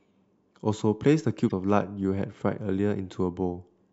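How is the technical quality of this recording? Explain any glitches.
One glitch stands out. From 1.45 to 1.52 s, damaged data in the compressed stream throws the decoder out of frame sync while it searches for the next header, producing a brief disruption in the speech.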